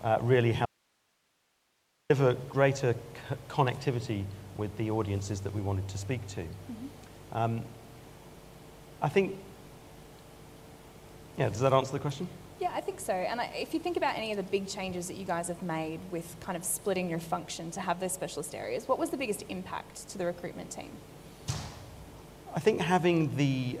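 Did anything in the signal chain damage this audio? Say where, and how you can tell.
Yes. The source feed was likely broken in the analogue wiring while the input stage stayed live, causing an audio dropout to a faint residue from 0.66 to 2.10 s: the sound cuts abruptly, leaving only hiss roughly 40 dB down for about 1.44 s.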